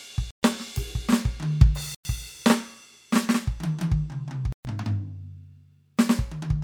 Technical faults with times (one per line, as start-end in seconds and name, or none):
0.31-0.43 Bluetooth stall
1.95-2.05 Bluetooth stall
4.52-4.65 Bluetooth stall